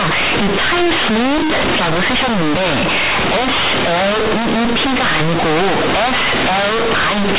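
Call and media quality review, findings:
Very loud, harsh buzzing distortion throughout; heavy noise in pauses, quiet speech as loud as peaks. Companded audio read as linear: A-law bytes played as plain 8-bit samples, unexpanded, so every sign change swings output over half its range.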